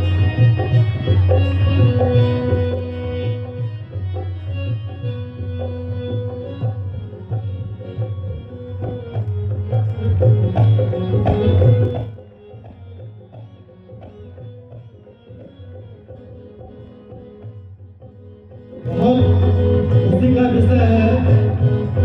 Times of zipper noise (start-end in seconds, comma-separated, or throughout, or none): 2.48-2.80, 9.20-10.24, 11.84-12.24, 18.68-19.04